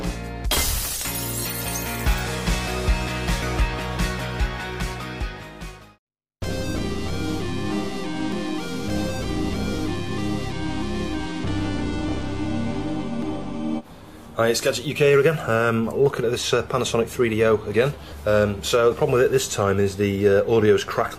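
Audio missing between chunks at 3.42, 8.32 and 13.22 s: a skip of about a tenth of a second, joined without silence, likely from chunked recording every 5 seconds.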